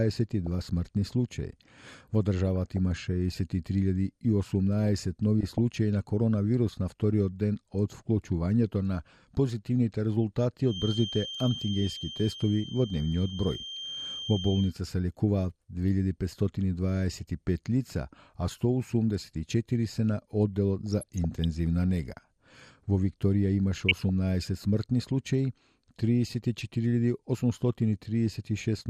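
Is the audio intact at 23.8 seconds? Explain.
No. From 23.74 to 24.09 s there is DAB burbling: bit errors that slipped past error correction corrupt sub-band samples and scale factors, so individual bands jump in level frame by frame, and short blips of noise appear in single sub-bands. Unlike steady codec gurgle, it arrives as a sudden, brief burst.

Underneath, the whole clip carries plainly audible MP2 compression, likely from a low rate around 80 kbps: starved upper sub-bands switch off and flicker, leaving a dull, granular gurgle. It is constant across the clip rather than confined to one moment.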